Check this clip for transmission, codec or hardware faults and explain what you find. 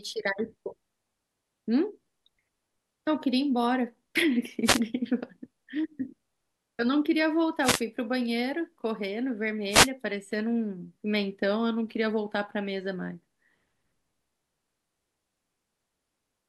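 There's one fault here: three wireless microphone noise hits, at 4.64 to 4.80 s, 7.62 to 7.81 s and 9.69 to 9.90 s. Each is a brief swish of static, 0.16 to 0.21 s long, as the FM radio link fades and receiver noise rises.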